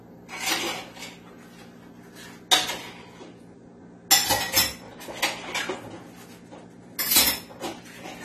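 Throughout, the sound is dull, smeared and fizzy, likely from AAC compression at a low bitrate near 32 kbps. A spectrogram shows a hard ceiling at 14 kHz.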